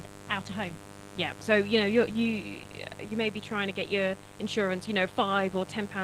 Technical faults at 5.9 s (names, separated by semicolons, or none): mains buzz; Opus voice compression